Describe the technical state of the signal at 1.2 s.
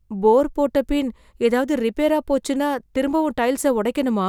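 At 1.2 s the speech signal is intact, with no dropout, distortion, glitch or other audible fault.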